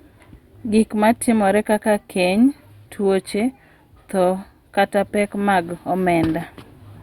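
No technical faults are audible anywhere in this speech recording.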